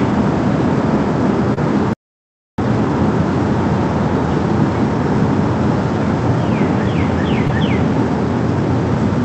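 At 1.54 to 1.58 s there is a short concealed packet loss: about 20 ms of the stream arrived too late for the decoder, and the receiver bridged the gap by extending the preceding sound for roughly 26 ms before crossfading back into the real signal. It is heard as a brief smear or wobble rather than a clean dropout. The Opus call path cuts off the upper band near 8 kHz.

From 1.93 to 2.58 s the output stops dead for about 650 ms, a playback stall. The sound cuts off mid-flow and stays silent before resuming. The likely cause is the player draining its buffer or its output thread being blocked.

At 7.47 to 7.51 s a second concealed packet loss of about 20 ms occurs. This time the synthesized fill lasts only about 15 ms, so it is heard as a quick smear.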